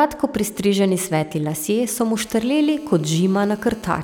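From 0.41 to 2.08 s, GSM signalling bursts sit about 25 dB under the speech. A nearby 2G phone is handshaking with its network, and the audio circuit rectifies its radio pulses into a galloping dit-dit-dit of brief 217 Hz buzzes. Unlike a call buzz, it keeps stopping and restarting.

From 2.20 to 3.99 s, a GSM phone buzz runs about 26 dB below the speech. The phone has moved into a call and transmits in bursts 217 times a second, producing a hard, raspy, harmonic-rich buzz that stays steady and ignores whatever the speech is doing.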